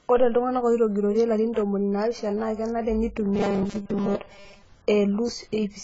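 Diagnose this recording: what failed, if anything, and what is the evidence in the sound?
The codec stage is at fault throughout. The speech sounds dull and smeared, with nothing above 7.6 kHz and heavy swirling damage. This is likely AAC compression at a very low bitrate, around 16 kbps. The coder discarded the upper band and starved the rest.

From 3.23 to 4.63 s, right after "ntomoni naapishana naa kenare", the voice turns into a rigid metallic buzz at 200 Hz. This is robotic sound from repeated short buffers, likely a driver or buffer underrun. A 5 ms block keeps repeating. Most of that stretch is repeats, while the real audio is skipped.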